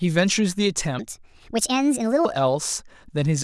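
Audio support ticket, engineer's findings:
Section at the wrong speed, 0.99 to 2.25 s. Likely a playback or edit stage clocking this span against the wrong rate, running it 1.44 times fast. Speech jumps up about seven semitones and hurries, then drops back to normal pitch and pace at the boundaries.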